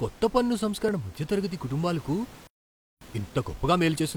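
An overlap between stream segments at 0.89 to 0.91 s, right after "కొత్త పన్ను" and before "మధ్యతరగతి కుటుంబాలకు", removes about 20 ms of speech where two segments' time stamps collided. The waveform jumps across the gap, giving a short click or tiny skip. The one-second spacing points to one-second segments.

A playback stall follows at 2.47 to 3.01 s, just after "మధ్యతరగతి కుటుంబాలకు". The speech cuts off mid-flow for about 0.55 s of silence; elsewhere, room noise sits about 22 dB below the voice. The likely cause is that the player ran short of data or its output thread was blocked until it recovered.

A time-compressed catch-up starts when the sound resumes at 3.01 s and runs to the end of the clip. The player trims its backlog by removing small slices and cross-fading the joins, so the speech moves about 1.15 times faster at unchanged pitch.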